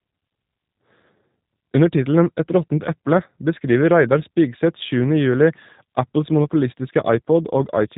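Speech runs through the G.729 codec from start to finish, with nothing above 3.8 kHz and a plainly rough, synthetic texture that fits an 8 kbit/s G.729A stream. Unlike simple band-limiting, the voice is rebuilt from a filter and sparse pulses, which makes it buzzy rather than merely muffled.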